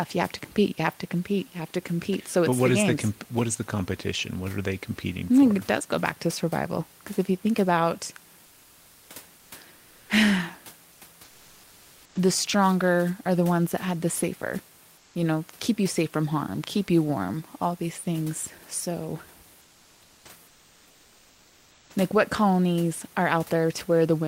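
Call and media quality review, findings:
Comfort noise in place of the background at 8.47–9.07 s (after "if you think about"), 9.37–9.49 s, 9.79–10.09 s, 15.01–15.13 s (between "that had the safer" and "you know keep you"), 19.63–20.23 s and 20.47–21.85 s (before "like what colonies are"). Real room noise in pauses swapped for flat, featureless hiss, mostly about 3–5 dB quieter, once about 1 dB louder. Likely Opus DTX: sender stops in silence, receiver synthesises filler noise.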